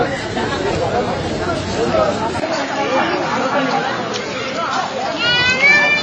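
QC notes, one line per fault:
Throughout, Wi-Fi interference: a quiet, steady tick about ten times a second, every 102.4 ms, from a nearby radio's beacon being rectified in the audio circuit.
Throughout, AAC compression: nothing above 9 kHz and plainly audible smearing and warble, likely from AAC-LC coding at a low bitrate, around 24 kbps.
2.4 to 6.03 s, input switched to a poorer device: a 20 ms gap at 2.4 s, then the top drops to 7.1 kHz at the same level, with a new faint hiss. This is likely a switch to a narrower-band device.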